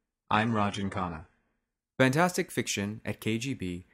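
From 0.0 to 2.0 s, the adaptive stream starts at a low bitrate: the player opened on a cheap version, which points to roughly 12 kbit/s HE-AAC, with stronger codec artefacts and nothing above about 10.9 kHz. At 2.0 s it steps up, which fits 96 kbit/s AAC-LC. The spectrogram shows a ceiling that lifts abruptly, with no gap in the waveform.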